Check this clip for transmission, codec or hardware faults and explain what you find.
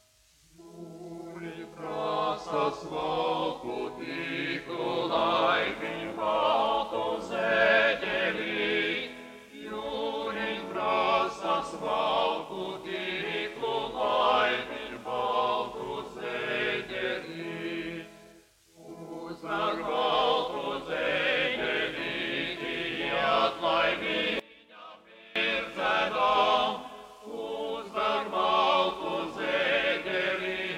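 One fault is present, confined to a single short section.

From 24.40 to 25.36 s the level collapses by about 24 dB and the sound turns faint. The likely cause is one channel inverted: with one stereo side in reversed polarity, the shared mono content cancels, leaving only the weak inter-channel difference.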